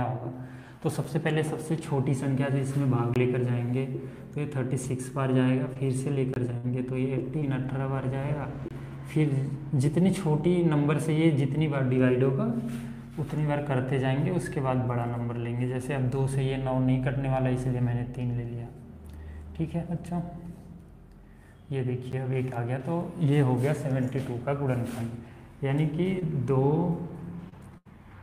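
Blocks of digital silence fall at 1.04 s (about 8 ms), 3.14 s (about 18 ms), 6.34 to 6.36 s and 8.68 to 8.71 s (each about 23 ms, which fits a 1024-sample buffer going unfilled), and 22.12 s (about 11 ms). Each is a hard cut to silence and back with no fade; the two shortest, under 15 ms, come across as ticks or dips, the longer ones as short holes.

Scattered short gaps run from 4.83 to 7.69 s and from 26.19 to 27.87 s. In each stretch, roughly three lost or late packets are patched by continuing the last sound. The longest patch is around 50 ms in the first stretch and 70 ms in the second. These are heard as brief ticks, smears or short dropouts, with the audio mostly clear between them.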